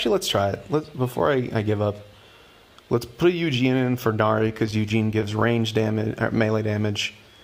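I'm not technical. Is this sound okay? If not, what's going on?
No. Between 4.39 and 5.57 s there are repeated stalls (stutter): the audio arrived late, so playback briefly ran dry about 15 times and stretched the last sound to cover each pause. Nothing is lost, but that stretch drags and stutters.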